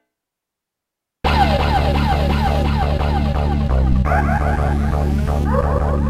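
The audio carries a phantom power thump from 3.92 to 3.98 s: a single low-frequency thump reaching about -8 dBFS and dying away with a decay of about 13 ms. It arises when phantom power, or another supply, is switched on or off while the input is live. The resulting DC step passes through the input coupling capacitors and reaches the recording as a pulse rather than as part of the sound.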